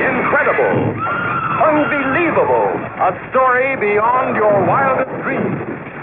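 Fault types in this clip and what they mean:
No technical faults can be heard anywhere in this clip. Nothing in the audio points to a problem in how it was captured, processed or played back.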